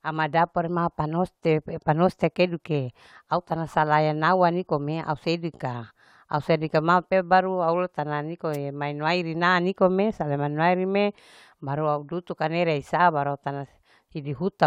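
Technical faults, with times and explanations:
8.53–8.57 s: wireless microphone noise hit. For 39 ms the analogue FM radio link fades as reflected signals cancel, so receiver noise surges as a brief swish of static over the speech. Unlike a digital dropout, the sound is masked by hiss, not cut to silence.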